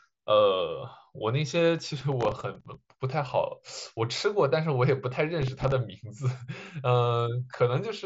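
Speech heard through a Bluetooth mSBC headset link, with nothing above about 7.7 kHz, carries processor overload crackle from 1.79 to 2.75 s and 5.42 to 5.72 s. Tiny buffers of a few milliseconds miss their deadlines and replay stale audio, showing as dense vertical broadband streaks on a spectrogram and jagged discontinuities in the waveform.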